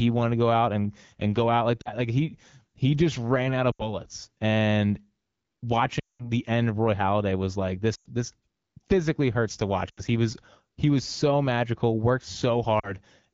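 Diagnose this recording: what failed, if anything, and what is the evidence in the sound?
Radio-link errors caused lost AMR speech frames. The decoder repeated stale pitch and vocal-tract settings at falling gain, producing smeared dips at 1.81, 3.71, 5.99 (longest, 200 ms), 7.95, 9.89 and 12.79 s.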